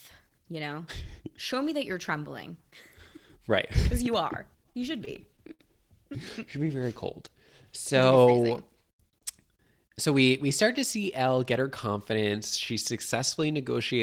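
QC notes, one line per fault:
4.73–5.61 s, repeated stalls (stutter): just after "you are", the speech drags and stutters as the jitter buffer runs dry four times. Each gap is bridged by extending the preceding sound, about 85 ms in all, roughly a tenth of the span, the longest near 50 ms. No audio is lost, only delayed. On a spectrogram the bridged stretches appear as smeared, repeated frames with flattened harmonics. In the waveform, short repeated cycles hold the last level before the signal resumes.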